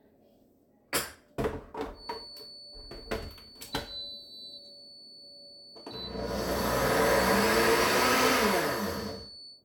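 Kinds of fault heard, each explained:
Feedback whistle, from 1.91 s to the end: a thin, steady tone near 4.5 kHz sits roughly 20 dB under the sound, swelling and fading slowly in level. The likely cause is a loudspeaker-to-microphone loop held just short of runaway, sustaining that single frequency.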